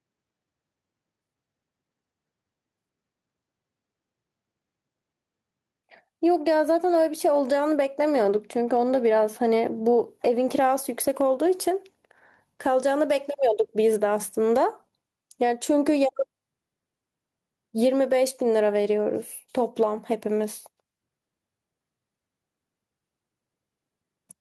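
A speech recording with gain pumping throughout. The level swings by roughly 10 dB. Loud and quiet passages sit close together and sound squashed. The likely cause is input gain set far too high, with a fast limiter clamping down on every peak.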